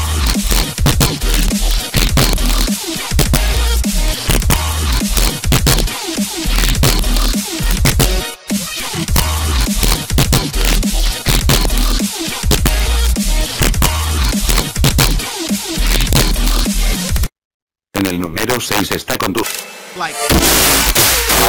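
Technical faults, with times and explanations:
Throughout, integer overflow: gain runs about 6 dB past the integer limit, so a few percent of peaks wrap to the opposite sign, cracking violently on loud sounds.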